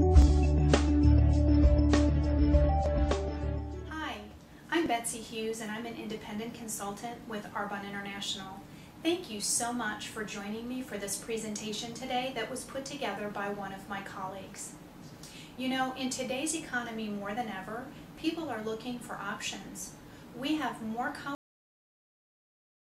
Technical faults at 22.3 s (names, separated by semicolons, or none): cut-off end